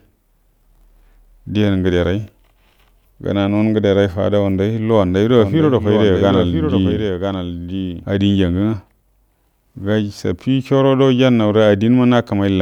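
From 5.39 to 8.05 s the speech carries a doubled audio track: a full-band copy trails about a second behind, a few decibels quieter, likely from a second, slower capture path. Unlike an echo, it has no decay or room colour and cuts in and out abruptly.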